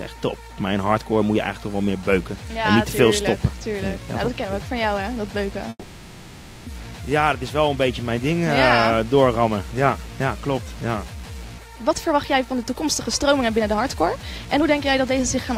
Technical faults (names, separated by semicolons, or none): call audio freeze; jitter buffer speed-up